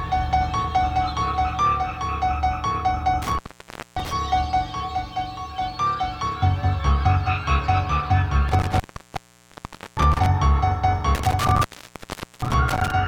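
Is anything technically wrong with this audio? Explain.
Yes: intermittent contact at 3.22–4.12 s, 8.48–10.26 s and 11.15–12.92 s, where a loose connection briefly opens for 0.58 s, 1.17 s and 0.78 s. Sound cuts out with crackle at each edge and faint hiss underneath, unlike a digital dropout's clean silence.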